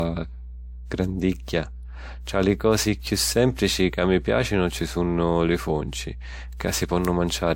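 Mains hum runs through the whole speech recording: a steady 60 Hz tone, roughly 15 dB below the speech, picked up from the power line through a ground loop or nearby transformer. On a spectrogram it appears as an unbroken horizontal line at 60 Hz, with fainter low harmonics stacked above it.

Throughout, the top end stops abruptly at 16.6 kHz, and the speech carries a mixed coding texture. This points to transcoding between lossy codecs, likely an MP3 pass followed by WMA 1, each codec adding its own artefacts while the lowest cut-off survives. A spectrogram shows a hard empty band above 16.6 kHz.

Bit error spikes occur at 3.07 s, just after "li cosi" and before "sìmplici ca mi piàcinu"; at 4.79 s, after "sìmplici ca mi piàcinu" and before "sunnu li funci"; and at 7.05 s. Each is a single corrupted sample, heard as one sharp tick unrelated to the speech. The waveform shows a lone one-sample needle, and the spectrogram a thin vertical line across all frequencies.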